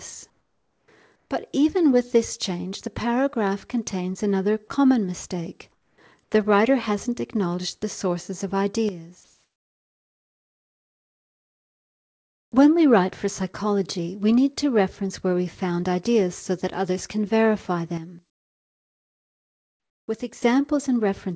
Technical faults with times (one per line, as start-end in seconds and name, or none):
0.30-0.88 comfort noise in place of the background
1.16-1.30 comfort noise in place of the background
5.72-5.98 comfort noise in place of the background
9.24-12.52 comfort noise in place of the background